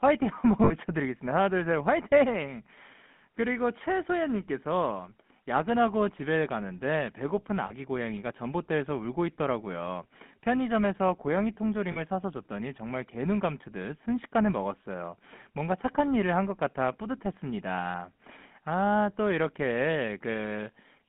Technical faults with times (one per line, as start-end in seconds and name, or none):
0.00-21.08 GSM full-rate codec
0.64-0.73 lost GSM frames
7.66-7.72 lost GSM frames
11.92-11.98 lost GSM frames